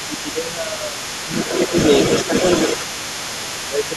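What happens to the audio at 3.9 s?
At 3.9 s a second voice runs underneath the talker, only a few decibels quieter than the speech, much too loud to pass as faint room sound. It is the other side's voice leaking through, present from the first moment of the clip to its end. The likely cause is that the talker's device plays the far end on a loudspeaker, the microphone picks that playback up again, and the echo canceller fails to strip it out before sending.

The talker's own voice is also pulled down at this point, by as much as roughly 10 dB, in a stretch that begins at 2.88 s and lasts to the end, about a second in all. This is speech suppressed in double talk. Both sides are speaking at once, and the echo canceller can likely no longer tell the talker apart from the loudspeaker echo, so it turns down everything the microphone captures, including the wanted speech.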